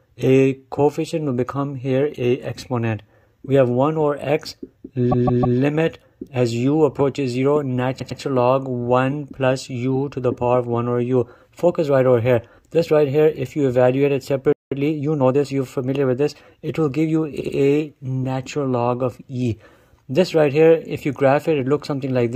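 At 5.11 to 5.58 s, repeated frames: a 157 ms block plays three extra times, a stuttering loop that adds about 470 ms. A shorter stutter of the same kind at 7.98 to 8.19 s repeats a 105 ms block twice, adding 209 ms.

From 14.52 to 14.72 s a playback stall cuts the sound off mid-flow for about 190 ms. This is likely an output buffer running dry.

Time-compressed catch-up follows from 14.72 to 15.46 s: the player trims its backlog at 1.25 times speed, so the sound is hurried at normal pitch.

At 17.40 to 17.55 s, repeated frames again: a 78 ms block is played twice more, a brief stutter that adds 157 ms.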